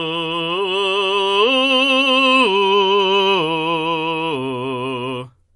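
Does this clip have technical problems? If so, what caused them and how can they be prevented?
Yes. Throughout the music, the encoder likely had too few bits for MP3 compression, consistent with roughly 48 kbps. It cut everything above 11.4 kHz and let weak frequency lines flicker between frames, which gives a plainly audible watery, swirly texture and smeared attacks. Encoding at a higher bitrate, or keeping a lossless master, prevents this.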